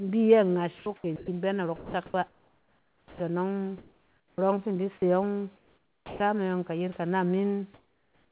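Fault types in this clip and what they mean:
sound chopped by the voice detector: Twice early on, from 0.78 to 1.28 s and again from 1.76 to 3.2 s, the speech turns choppy. About 280 ms of the first stretch and about 1.18 s of the second get swapped for synthetic fill. This is likely the sender's voice detector toggling on and off over quieter syllables, so bits of real speech never get sent.
comfort noise in place of the background: In the pauses from 3.78 to 4.38 s, 5.56 to 6.2 s, and 7.74 s to the end, the real room tone gives way to a smooth, featureless hiss. It drops by about 12 dB before "fi in di se" and by about 14 dB in the last pause, but is barely different, about 1 dB, after "in di se yↄng". The likely cause is discontinuous transmission: the sender goes quiet and the receiver invents background to fill the gap.
onset clipped by the voice detector: Speech comes back with a hard, chopped-off start three times. 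At 4.3 s, just before "fi in di se", about 80 ms of the beginning is missing. At 6.16 s about 40 ms is gone, and at 8.26 s about 60 ms. Each time the first moments are covered by fill noise rather than the real attack, likely because the detector was slow to notice sound had resumed.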